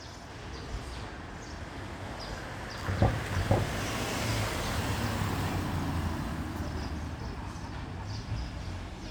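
At 3.57 to 3.60 s, damaged data in the compressed stream makes the decoder misread frames, lose sync and hunt for the next header. A brief glitch results. The spectrogram shows a smeared broadband smudge and the waveform a discontinuity.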